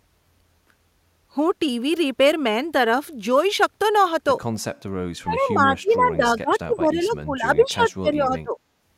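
A speech recording with two problems in the back half. From 5.22 to 8.57 s the voice keeps ducking, by as much as about 25 dB at its deepest, for roughly three seconds in total. That's speech suppressed in double talk: the echo canceller was likely confused by both sides talking together and pulled this talker down along with the echo. Inside that stretch, at 7.04 to 7.1 s, there's a brief echo leak, a faint copy of the voice arriving 204 ms late and sitting around 30 dB below the speech. That's likely the far end's loudspeaker pickup slipping past its echo canceller and coming back down the line.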